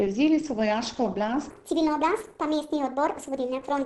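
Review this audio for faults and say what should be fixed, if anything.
The whole clip was likely squeezed through a low-rate Opus encoder running in its SILK speech mode, which fits a bitrate of around 16 kbps. The encoder keeps only a wideband signal, so nothing is left above about 8 kHz and the speech sounds muffled. The coarse model also leaves the voice hoarse. This Opus compression damage is plainly audible from start to finish and should be fixed by re-exporting from a cleaner source.

From 1.51 s to the end, just after "so vojaško", the section was played at the wrong speed, likely because the player or editor ran it against the wrong clock. Playback runs at 1.41 times the original rate, and speed and pitch rise together, so the voice jumps up roughly seven semitones and sounds high and hurried. The change happens abruptly, and the section should be restored to its original rate.

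To prevent both, encode at a higher Opus bitrate in fullband mode and confirm that every section's sample rate matches the project clock before export.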